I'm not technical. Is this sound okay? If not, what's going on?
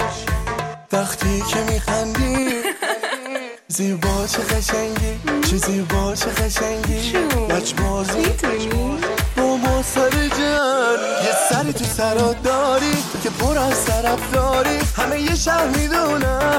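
Yes, nothing in this sound stood out as a problem when listening to it.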